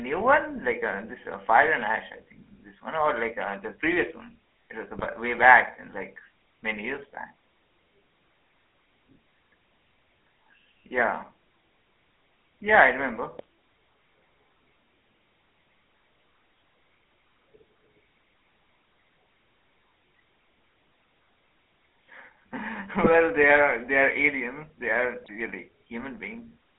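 A buzzy, gravelly roughness runs through the whole speech clip, with the sound confined to a narrow band of roughly 250 Hz to 3.4 kHz. This is the GSM full-rate codec, at a rate that fits 13 kbps. It rebuilds the voice from a vocal-tract filter driven by a sparse, regularly spaced pulse excitation. That thinned excitation gives the grainy buzz, and the telephone band strips the lows and the air above 3.4 kHz.

Short squawks and gargling pops break through at five points. The first is at 0.70 to 0.74 s, just before "uh this uh". The second is at 4.91 to 5.07 s, ahead of "way back and like", and it is the longest of them. The others are at 13.35 to 13.44 s, at 23.04 to 23.14 s before "they are they", and at 25.24 to 25.31 s. The last two sound harsher, which fits a heavier error rate there. These are GSM bit errors: corrupted filter, pitch or gain values bend the spectrum or spike the level for a few frames at a time.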